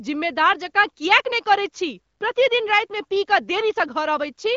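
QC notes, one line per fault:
No faults found in this speech clip. It comes through AMR wideband (HD Voice) coding at a rate high enough that the speech holds clear, with nothing above about 7.1 kHz.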